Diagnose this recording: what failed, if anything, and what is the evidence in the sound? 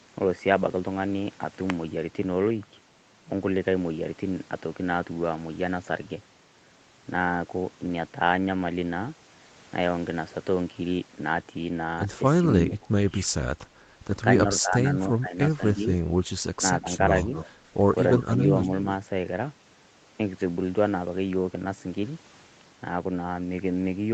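The call processing is where this one goes wrong. Between 12.62 and 13.34 s, 14.61–14.86 s, 15.2–15.88 s and 16.58–16.86 s the speech ducks in short pieces. The deepest dip, around 25 dB, comes in the first stretch, and the later ones are shallower, roughly 10 to 15 dB. That pattern looks like speech suppressed in double talk. The likely cause is the echo canceller mistaking overlapping far-end audio for its own echo and pulling the local talker down along with it.

Right after that you get an echo leak, at 16.92–17.5 s and again at 18.11–18.61 s. A fainter copy of the speech trails the original by 266 ms, sitting about 10 dB below it the first time and about 15 dB below the second. It's likely a loudspeaker at one end feeding back into its own mic, with that side's canceller failing to subtract all of it before sending it back.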